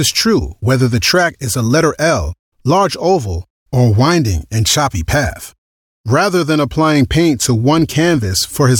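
Nothing in the recording stood out as a technical problem on listening.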